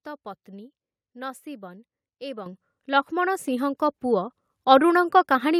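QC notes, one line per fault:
2.46 s, 3.48 s and 4.50 s, microphone volume stepped up: the speech and the background under it jump louder together at each point, by about 9 dB at 2.46 s and then about 3 dB at each later step, with no fade. The call software judged the microphone too quiet and raised the device's input volume in single steps, roughly once a second, so everything captured is amplified at once.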